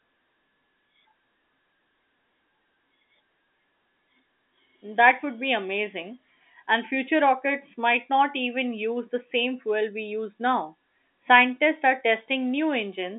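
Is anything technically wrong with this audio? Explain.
No, nothing is technically wrong with this speech, which carries the expected character of G.711 A-law telephone coding at 64 kbps, with the band running from about 250 Hz to 3.6 kHz and nothing present above roughly 3.8 kHz.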